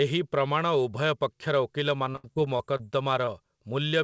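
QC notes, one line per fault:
2.12–2.81 s, repeated packet loss (robotic sound): a handful of gaps, the longest about 76 ms, are patched by extending prior sound, making roughly a fifth of the stretch choppy and robotic.
3.25–3.29 s, short concealed packet loss: about 20 ms never arrived in time and was bridged by continuing the preceding sound, leaving a brief smear before real audio resumes.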